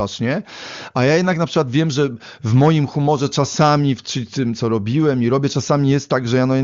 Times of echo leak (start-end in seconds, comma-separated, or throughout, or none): none